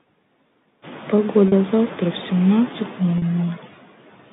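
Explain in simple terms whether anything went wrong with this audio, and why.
Noise suppressor artifacts run through the whole clip. A noise suppressor checks the sound in tiny slices and turns down whatever frequencies it judges to be steady background noise. Between words it pushes the background right down, but under the speech the noise comes back up, so the hiss seems to breathe in and out with the talking. The room's own background, which gets noticeably louder at about 1 second, is what it is working against.

Packet loss with pitch repetition happens twice, at 1.48 s and 3.18 s, each lasting about 40 milliseconds. At those moments a small piece of the audio never arrived. To cover the hole, the receiver replayed the last cycle of the speaker's pitch over and over. The gaps are very short, so instead of silence you hear a brief, slightly held buzz before the speech carries on.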